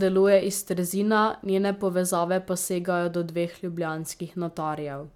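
Nothing goes wrong anywhere in this speech recording; there's no technical fault to point to at any moment.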